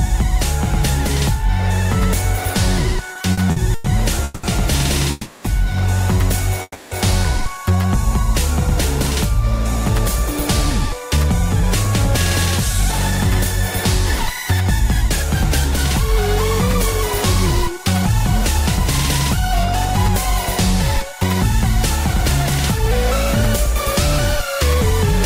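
Repeated stalls (stutter) run from 3.13 to 4.45 s: packets arrived late, so the jitter buffer kept running dry and the receiver stretched the last sound through six gaps, the longest 190 ms. The sound catches and drags for about a third of that span, with nothing lost.

Call audio freezes follow at 5.11 to 5.46 s and 6.62 to 6.93 s. The sound hangs on a fading continuation of itself for 330 ms and then 290 ms, the second trailing into about 30 ms of silence, before resuming exactly where it stopped. A likely cause is packets held up in transit, emptying the buffer.

A jitter buffer slow-down from 7.64 to 8.13 s has the receiver repeating tiny pitch-period slices to rebuild its reserve, adding 54 ms. The sound plays at 90% speed with unchanged pitch, audibly drawn out.

Jitter buffer speed-up covers 9.73 to 16.19 s and again 17.64 to 24.76 s. With surplus audio queued, the receiver trimmed short pitch-period pieces, shedding roughly 150 ms in each stretch. 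Playback runs at 102% speed at the same pitch.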